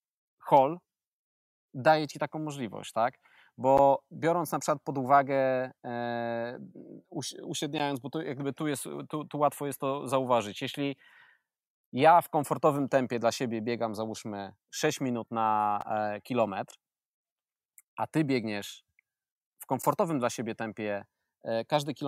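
Gap between chunks at 3.77 s, 7.79 s, 15.81 s and 19.82 s: the speech was delivered in 4-second chunks, and each join leaves a 12 ms silence. Nothing is lost, but the sound stops abruptly and resumes with hard edges, a brief dropout between "ci taką możliwość tak" and "biorąc na przykład pod", after "minut na", and just before "dla siebie tempie". The holes fall at regular intervals that follow the chunk length.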